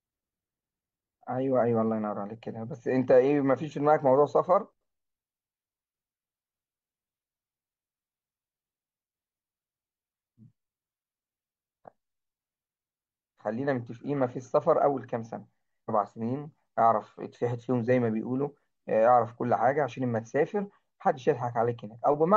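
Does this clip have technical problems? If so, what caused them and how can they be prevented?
Yes: at 15.85 to 15.90 s the speech jumps abruptly ahead with a small blip, which sounds like a stream segment skipped, likely because one chunk failed to load and playback resumed from the next. A waveform shows a sudden discontinuity there, and a spectrogram shows a thin vertical broadband stripe. Retrying failed segment downloads and keeping a larger playback buffer would prevent it.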